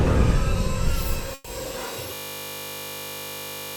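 At 1.34 s there's a call audio freeze of about 110 ms: the last sound smears into a fading buzz or hiss, likely packets stalling, then resumes with nothing lost. From 2.15 s to the end, a system hang loop takes over, a 20 ms chunk repeating exactly, giving a steady 50 Hz buzz.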